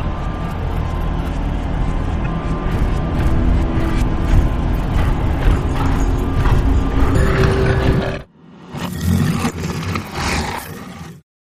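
At 2.21 s there's a quick glitch lasting to about 2.27 s, classic damaged data in a compressed stream: a few bad bytes trip up the decoder, it loses frame sync and hunts for the next header, so the sound breaks for that moment. The same glitch returns from 8.14 to 8.19 s. From 7.15 s right through to the end, everything runs at 1.42 times normal speed, a section at the wrong speed. Pitch rises about seven semitones along with the tempo, so it sounds high and rushed, likely from that stretch being played against the wrong clock.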